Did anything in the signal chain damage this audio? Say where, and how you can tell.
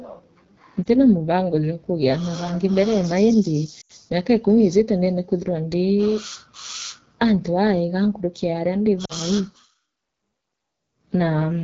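Yes. At the codec stage, the whole clip carries AMR wideband (HD Voice) coding damage: the speech is rough and raspy throughout, with a noisy top band. The vocal-tract model is starved of bits, and that degree of roughness fits one of the lowest AMR-WB rates, around 8.85 kbit/s.

On the network or radio side, there are lost AMR speech frames at 0.84 to 0.87 s, 3.81 to 3.92 s, and 9.05 to 9.13 s. The decoder conceals each gap by repeating the last good pitch and envelope at falling gain. The first gap is a brief dip or warble, which points to a single 20 ms frame. The later gaps drop to near silence, suggesting runs of about four and two frames.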